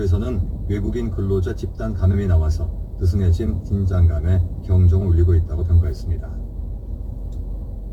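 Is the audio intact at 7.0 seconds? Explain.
No. At 7.0 seconds, as throughout the clip, a faint gritty, inharmonic fizz rides on the louder and brighter parts, roughly 40 dB below the sound itself. This is crude rate conversion: samples were simply repeated to raise the rate, likely from 44.1 kHz to 48 kHz, with no filtering, producing unrelated tones.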